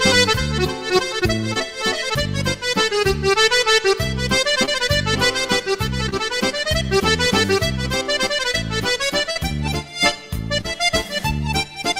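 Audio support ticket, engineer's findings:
Short concealed packet loss at 1.53, 4.65, 6.09, 8.52, 9.31 and 10.61 s: 20 ms gaps (40 ms at 9.31) filled by decoder extrapolation. Brief smear or wobble, not silence, unlike a hard dropout.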